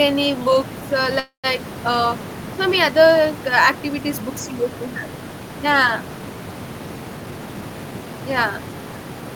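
At 1.19 s, just after "books uh", the speech stops and a call audio freeze fills the space until 1.46 s. The last sound carries on briefly as a fading buzz. It then drops to silence for about 120 ms, with the room noise sitting about 15 dB below the speech. The likely cause is delayed packets draining the jitter buffer. Speech resumes at "uh so" with nothing lost, but it now runs 242 ms later.

From 7.17 s to 8.58 s, a jitter buffer speed-up plays the speech at 117% of its normal rate. The pitch stays the same, but the talking sounds hurried. The receiver had built up more audio than it wanted. To catch up, it cut many tiny pitch-period slices in a row, about 300 ms in total.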